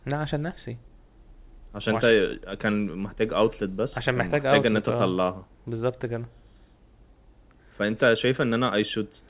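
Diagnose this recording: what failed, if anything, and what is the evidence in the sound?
Nothing has failed: the speech comes over the WebRTC call path intact, with no content above 4 kHz, a telephone-band limit that fits G.711 mu-law coding at 64 kbps, and no stage from capture through playback shows a break in the signal.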